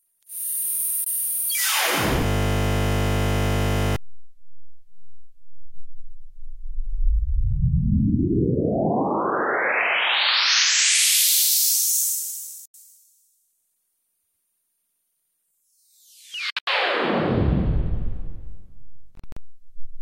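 At 1.04 to 1.07 s, audio packets most likely failed to reach the Bluetooth headphones in time and were discarded. This Bluetooth dropout leaves a clean hole of about 21 ms, roughly one packet's worth. The sound picks up afterwards as though it had kept running underneath.

From 2.26 to 3.96 s, a system hang loop takes over. The computer or its driver stalled, while the audio hardware kept replaying the same 20 ms stretch of its ring buffer, some 85 times over. Because the looped piece is so short, it repeats 50 times a second. That fuses into a steady, flat buzz pitched at 50 Hz in place of the real audio. Normal sound returns once the system recovers.

Further dropouts of the same kind follow. At 12.66 to 12.74 s there is a single continuous gap of about 85 ms, consistent with four lost packets. At 16.50 to 16.67 s the losses come as several gaps spread across about 170 ms, together about 150 ms missing, the longest about 85 ms. 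The result is a broken, stuttering patch. At 19.15 to 19.37 s, about 107 ms is lost in gaps scattered over about 210 ms, none longer than about 43 ms.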